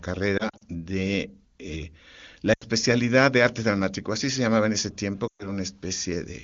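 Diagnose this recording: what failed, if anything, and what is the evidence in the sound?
Lost AMR speech frames on the radio link, concealed in the AMR-WB decoder. Between 0.37 and 0.63 s, just before "de eh la", short losses scattered over about 240 ms, none longer than 40 ms, give brief warbles and dips. At 2.53 to 2.64 s, after "de eh la", and 5.27 to 5.49 s, after "se llamaba en ese", the sound smears and sags toward silence, then returns weak. These are not hard gaps or clicks: the decoder replays the last pitch and vocal tract settings with falling gain.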